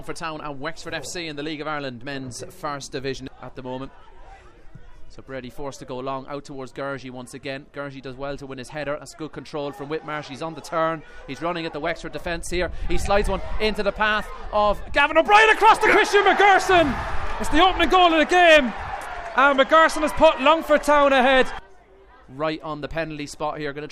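Dropped buffers (overruns) at 13.74 s and 17.84 s are heard as brief jumps where the audio skips ahead with no silence. A few milliseconds go missing each time, likely because the recording software fell behind and the hardware overwrote samples before collection.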